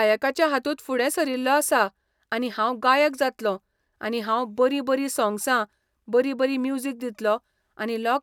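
No technical faults occur at any point in this speech recording.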